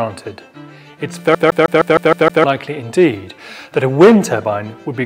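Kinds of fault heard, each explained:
CD stuck on one turn: a scratch keeps knocking the laser back a track at the same point each revolution, so from 1.35 to 2.44 s a 156 ms fragment plays seven times over, each jump marked by a brief mute, giving a rapid, even stutter.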